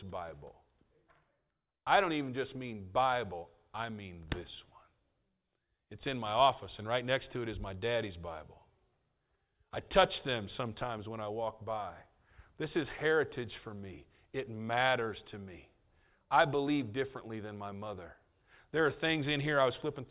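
No technical faults can be heard anywhere in the speech recording. There is nothing here to place on a timeline or trace back to a cause.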